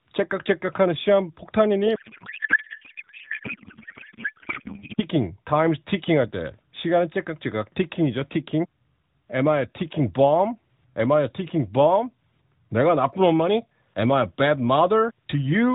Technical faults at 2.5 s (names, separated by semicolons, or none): codec payload misread